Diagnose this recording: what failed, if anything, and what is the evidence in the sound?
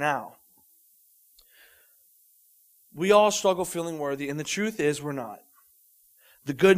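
The fault is in sample-format conversion: low bit depth with noise shaping, present throughout. A steady, thin hiss sits about 30 dB below the speech. It rises sharply toward the top of the band. That fits about 10 bits, with the rounding error fed back and pushed upward in frequency.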